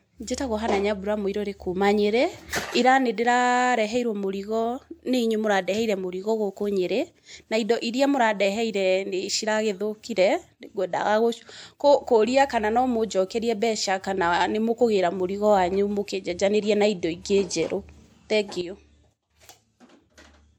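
Speech with a sudden gain jump at 18.61 s. Voice and background noise drop together by about 11 dB until the end. A gain change applied without a ramp is the likely cause.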